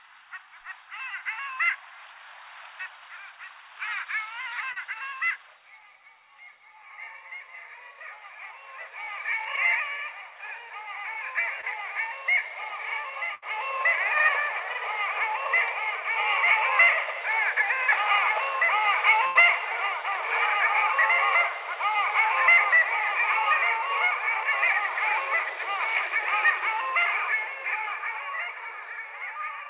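Short concealed packet loss occurs at 4.72 to 4.78 s, 9.56 to 9.59 s and 11.61 to 11.65 s. About 40 ms of audio is missing at the first point and 20 ms at each of the others. In each case the data arrived too late or never arrived, and the receiver covered the hole by extending the preceding sound, pitched if it was tonal and as shaped noise if not, then blended back. Each one is a brief smear or wobble, and a short transient can disappear.

A burst of packet loss follows at 13.35 to 13.44 s and again at 19.27 to 19.37 s, each dropping about 80 ms. Here the concealment runs longer, roughly 70 to 85 ms, and fades out as it goes. A tonal sound turns into a held, decaying buzz and a noisy one into a dying hiss. The audio then resumes further on, with that stretch gone.

Throughout, nothing above 4 kHz is present, which points to a narrowband call codec such as G.711 at 64 kbps.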